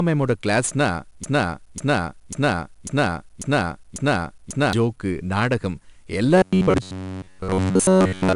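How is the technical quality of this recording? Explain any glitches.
The recording has three clear technical problems: a constant codec grit throughout the speech, a long stutter near the start, and a mechanical buzz at the end.

4-bit ADPCM compression runs through the whole clip. Every louder syllable carries a gritty hiss that rises and falls with the speech, and sharp onsets sound roughened. Each sample is stored only as a small 4-bit step from a predicted value, so the error follows the signal's level and the step size cannot keep up with sudden attacks. Nothing is present above 10.6 kHz, which suggests a sample rate of around 21 kHz and a data rate of about 88 kbps, and the sound is noticeably dull.

A broken-record loop runs from 1.24 to 4.73 s. A fragment 545 ms long plays six times back to back, identical each time, and the speech that should have filled those three and a half seconds never arrives. 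The likely cause is a player or stream that stalled and kept re-sending the last chunk it held until new data came in.

Robotic sound from repeated short buffers runs from 6.38 s to the end at 8.35 s. The speech turns into a rigid, metallic buzz pitched at 93.8 Hz, and it only loosely follows the rhythm of the speech. Most of that stretch consists of recycled material. The likely cause is new audio arriving too seldom, with the software refilling the gap by repeating a roughly 10.7 ms slice. That repetition rate imposes the fixed buzz pitch and drops the real audio.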